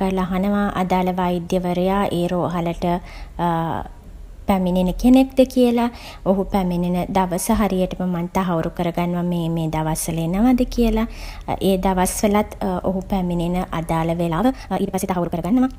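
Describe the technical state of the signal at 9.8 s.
At 9.8 s the speech signal is intact, with no dropout, distortion, glitch or other fault audible at that moment.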